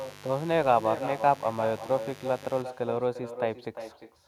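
From the start to 2.62 s, a mains buzz sits about 20 dB below the speech. Sharp switching spikes at twice the 50 Hz mains rate put harmonics up to several kHz, so it sounds raspy and bright rather than like a smooth, low hum.

Throughout the clip there is echo with no canceller. The far end's loudspeaker feeds its microphone, and the speech returns around 400 ms later, about 10 dB quieter and thinner. It is a distinct delayed copy, not the smeared tail of room reverberation.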